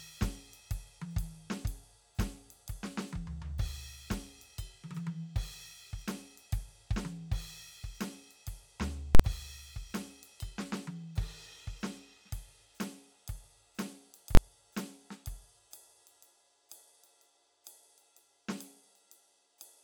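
Two violent bangs break through the music, the first from 9.15 to 9.20 s and the second from 14.35 to 14.37 s. The first lasts about 46 ms and the second about 23 ms. These are invalid numbers at full scale: a calculation went infinite or invalid and the output was pinned at one extreme value for a whole processing block, which fits 2048-sample and 1024-sample blocks.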